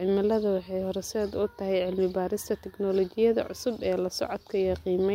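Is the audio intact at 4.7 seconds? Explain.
Yes, at 4.7 seconds the speech plays through cleanly, with no dropout, click, distortion or other fault.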